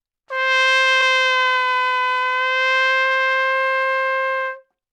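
At about 1.01 s the sound briefly smears for roughly 21 ms. This is AAC frame loss with concealment: what fits a single lost frame was patched from the preceding spectrum.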